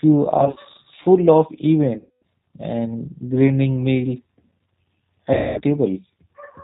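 Throughout, the speech carries G.729 codec damage: the audio is cut off above 4 kHz and rebuilt from a vocal tract filter, pitch predictor and a few pulses per frame, which points to 8 kbit/s G.729A. It sounds plainly rough and synthetic.

At 0.38 to 0.58 s, VoIP packet loss concealed by the speech codec leaves short gaps totalling 80 ms, each no longer than 30 ms, smeared into brief buzzy or noisy stretches. Longer losses of about 230 ms (1.99 to 2.22 s) and 220 ms (5.34 to 5.62 s) stretch into a fading buzz or coloured noise, and the speech stays weak or distorted as it recovers.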